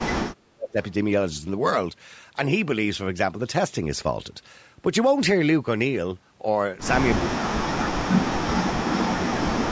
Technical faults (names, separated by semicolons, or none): speech suppressed in double talk